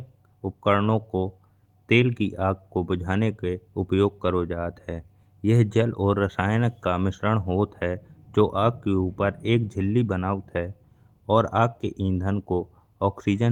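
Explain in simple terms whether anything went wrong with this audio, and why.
Nothing went wrong here: the speech recording comes across as technically sound, with no audible glitches, dropouts or distortion anywhere along its length.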